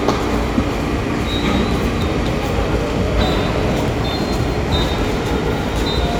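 At 2.02 s and again at 3.88 s there's a quick glitch, the classic sign of damaged data in a compressed stream. Part of the encoded file was bad, so the decoder couldn't read those frames properly, lost its place and hunted for the next valid frame header. Each glitch is over almost instantly.

From 4.98 to 5.17 s you get a gritty little burst of processor overload crackle. The machine couldn't finish its audio buffers in time, and something like seven deadlines slipped over that stretch. Nothing was held over for the misses, so each one just drops a chunk of roughly 10 ms with a hard edge. Strung together, those gaps make a tearing crackle laid over the sound, and it clears once the load eases.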